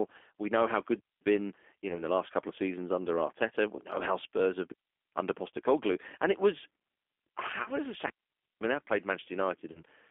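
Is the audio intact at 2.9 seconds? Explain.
No. At 2.9 s the speech carries G.729 codec damage, which runs through the whole clip. The codec rebuilds each 10 ms frame from a vocal tract filter, a pitch predictor and a few pulses. It keeps no finer detail, and the thin result points to an 8 kbit/s VoIP link. The band is held between 250 Hz and 3.5 kHz. The speech sounds narrow, rough and plainly synthetic.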